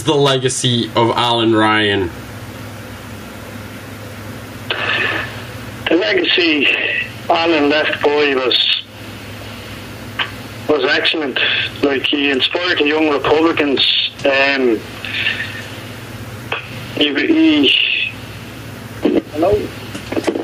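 Gain pumping runs through the whole clip, with a gain swing of around 10 dB. This is likely an input gain set far too high, with a fast limiter or compressor clamping down whenever a loud sound arrives and releasing once it passes. Loud and quiet passages end up pushed toward the same level, so the audio sounds squashed.

A loud pop arrives from 19.53 to 19.56 s, a single sharp thump peaking around 5 dB above the surrounding sound, which carries on beneath it. The likely cause is a sudden voltage step or spike, from a plug, switch, static discharge or driver glitch, entering the signal chain. The circuitry after it shapes that spike into a brief percussive click-thump sitting on top of the audio.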